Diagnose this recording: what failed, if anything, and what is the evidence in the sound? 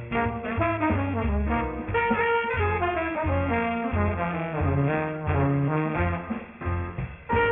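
Aliasing runs through the whole recording. The failure sits in sample-rate conversion. The sound points to a drop from 44.1 kHz to 6 kHz with no anti-alias filter. Everything above the 3 kHz fold point has been mirrored back down. The folded energy lands on pitches unrelated to the source, roughly 15 dB under the wanted signal. Sibilant and bright content turns gritty and metallic. The spectrum stays dense right up to the 3 kHz band edge.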